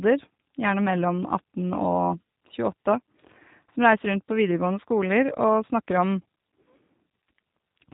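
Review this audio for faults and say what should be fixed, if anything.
The whole recording carries G.729 codec damage, plainly audible from start to finish. The speech has been rebuilt from a vocal tract filter, a pitch predictor and a sparse pulse excitation rather than carried as a waveform, so it comes through rough and slightly synthetic. Everything above 4 kHz is missing, which dulls sibilants and fricatives. The character fits an 8 kbit/s narrowband VoIP link, most likely the G.729A variant. To prevent this, record or route the audio over a wideband codec at a higher bitrate, or capture it locally before it enters the telephony path.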